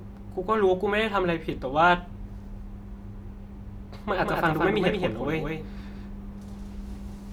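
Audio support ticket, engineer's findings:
Doubled audio track from 4.19 s to the end. Speech suddenly gets a second full-band copy trailing around a fifth of a second behind, a few dB quieter, no room tail or decay on it, just a dry, clean repeat. Hard onset, no fade-in. Likely a second capture path with extra latency also feeding the mix, or an edit leaving two out-of-step copies stacked. Worth checking routing for a duplicate send.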